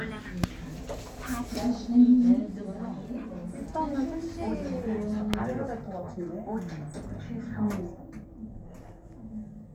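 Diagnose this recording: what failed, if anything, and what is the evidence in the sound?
Loud pops at 0.44–0.46 s and 5.34–5.36 s, about 20 and 25 dB over the sound. Likely an analogue wiring voltage step.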